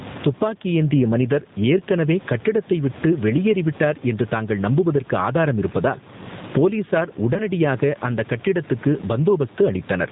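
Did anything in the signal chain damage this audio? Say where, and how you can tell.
Yes. Gain pumping runs through the speech, a swing of roughly 15 dB. The likely cause is input gain set far too high, with a fast limiter clamping each peak in the call processing.

The G.729 codec damage is plainly audible throughout. Nothing above 4 kHz survives. The speech sounds rough and synthetic, because this 8 kbit/s codec rebuilds it from a vocal tract filter, a pitch predictor and a few pulses per frame.

VoIP packet loss concealed by the speech codec shows at 7.34 to 7.42 s, right after "நம்புவதற்கு ஆதாரம் இருப்பதால் போலீசார்". About 20 ms went missing, which fits one lost packet. The decoder stretched its last pitch and filter to fill the gap, lowering the gain as it went, and recovery stayed weak for tens of milliseconds afterwards.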